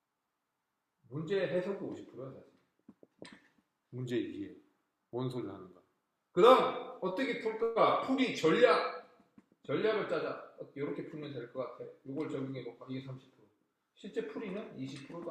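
At 7.13 to 7.17 s the sound is briefly held, with a faint buzz. This is a short stall from a late packet: the buffer ran dry, and about 16 ms was stretched before playback resumed with nothing lost.

From 7.63 to 7.78 s the last sound is drawn out as a fading buzz, never reaching silence. This call audio freeze was likely caused by delayed packets emptying the jitter buffer; about 127 ms of filler was inserted and nothing was skipped.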